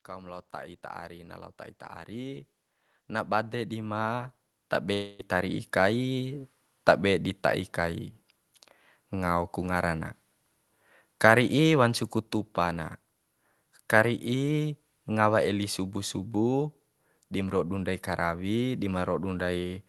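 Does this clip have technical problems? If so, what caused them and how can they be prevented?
Yes. From 0.05 s to 6.54 s, automatic gain rising lifts the level by about 18 dB. The gain control judged the input too quiet and kept raising its gain, so voice and background swell together. On a waveform the envelope widens steadily across those six and a half seconds. Setting a proper fixed input level, or slowing or capping the automatic gain control, prevents this.

From 4.93 s to 5.21 s the sound turns into a smeared buzz that fades, and then resumes further on with about 0.26 s missing. This is likely a long network dropout: no packets arrived, so the receiver extended the last sound to fill the gap. A spectrogram shows blurred, stretched bands fading across that stretch. A more stable network connection, or a larger jitter buffer, prevents this.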